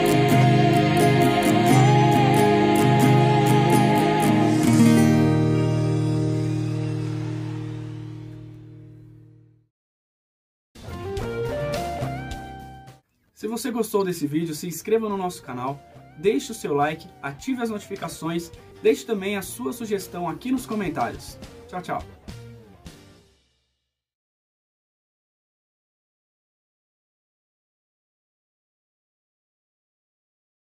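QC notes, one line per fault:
4.25 s, 13.91–14.02 s and 18.02–18.04 s, corrupt frame decoded: flipped bits in compressed frames were decoded anyway, so misread gains and codes put energy at wrong frequencies, heard as brief blips peaking about −15, −30 and −20 dBFS. The second spans a few frames, the others one.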